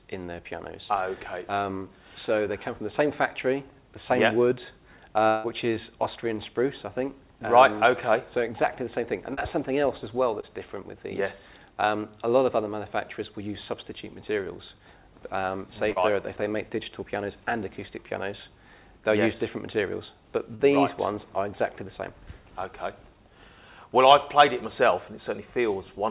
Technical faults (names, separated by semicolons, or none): long network dropout; short concealed packet loss